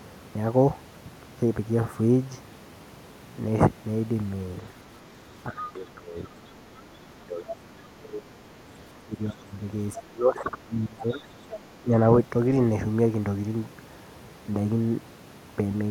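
From 5.49 to 6.18 s, 7.21 to 8.52 s, 8.99 to 9.55 s, 9.96 to 11.35 s and 11.82 to 11.97 s, the talker's speech sinks by roughly 10 to 25 dB. That's speech suppressed in double talk: the echo canceller likely couldn't separate the talker from the far end. Around 5.63–5.72 s, 11.17–11.21 s and 11.5–11.58 s, short faint scraps of the other side's voice leak through, likely leftover loudspeaker echo that was never cancelled.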